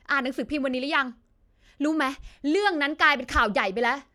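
Speech, with nothing technically wrong in it that can be heard.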